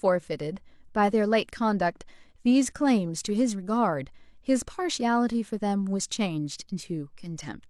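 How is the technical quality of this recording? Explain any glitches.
The recording has no technical glitches to explain. Nothing in the audio breaks up, drops out or jumps at any point in the speech.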